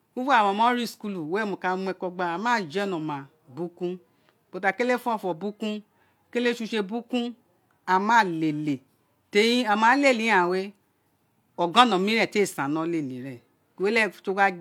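A speech recording with nothing technically wrong with it.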